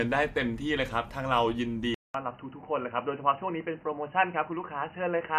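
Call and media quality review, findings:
Speech turns dull and boxy from 1.94 s to end, after a 200 ms gap. Nothing above 3 kHz. Level drops roughly 5 dB. New background noise sits well below the speech. Likely input switched to a poorer device.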